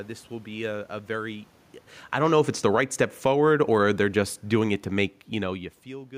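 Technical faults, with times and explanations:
2.04–3.48 s, automatic gain falling: just after "be a a very", the level control judges the input too loud or its background noise too strong and eases its gain down by about 6 dB, so the speech and the room noise beneath it sink together. The waveform envelope tapers steadily, and the whole spectrogram dims evenly across all frequencies.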